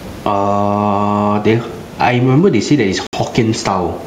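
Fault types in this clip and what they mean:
Gain pumping: the gain swings by about 10 dB, pulled down on each loud sound, likely a fast limiter reacting to excessive microphone gain.
Bluetooth stall: the sound cuts to total silence for 63 ms, 3.07 to 3.13 s, likely a Bluetooth stall, then picks up again, unlike a dropout masked by codec concealment.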